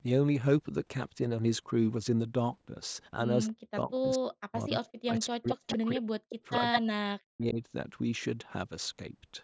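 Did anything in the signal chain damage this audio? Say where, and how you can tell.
Yes, in the call processing. The speech dips by up to about 40 dB at 3.47–3.91, 4.16–4.72, 5.03–6.27 and 6.59–7.6 s. This is likely speech suppressed in double talk: the echo canceller turned the near talker down with the far end.

A delayed copy of the speech, 211 ms late, surfaces at 5.49–5.77, 5.95–6.00, 6.29–6.35 and 6.72–6.80 s, from about 15 dB below the speech up to equal level. This is likely echo leak from a loudspeaker path. It is a discrete repeat rather than the smooth decay of room reverb.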